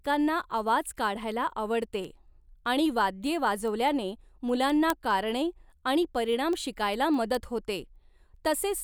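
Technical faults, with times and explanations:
0.21–8.77 s, word clock ticks: a steady run of about forty sharp ticks, roughly five per second, sits under the speech. The receiving device runs on its own clock, around 100 ppm off the sender's, so each slip drops or repeats one sample.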